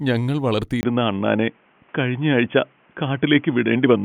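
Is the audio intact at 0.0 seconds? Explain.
Yes, the speech at 0.0 seconds plays cleanly, with no dropout, click, distortion or other fault at that moment.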